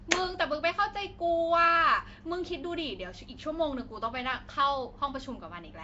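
Throughout, the speech has a rough, hissy halo and a smeared, underwater texture, likely Nellymoser compression. A spectrogram shows noise-filled bands and nothing above 7.8 kHz.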